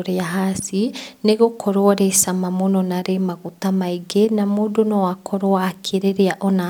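The speech signal carries no audible technical faults at any point in the recording.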